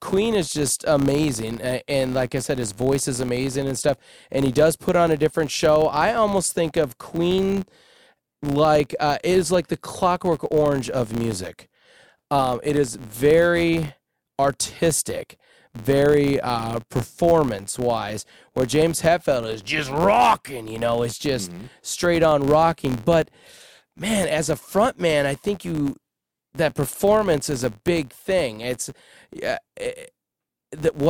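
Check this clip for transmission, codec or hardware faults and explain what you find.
One fault runs through the whole clip. A filter restarted on every block forgets its state and starts each block from silence, leaving a small transient at every boundary. Across the speech this is a buzz at 86.1 Hz, which fits a 512-sample block. Unlike mains hum, it rises and falls with the signal's level and fades in pauses.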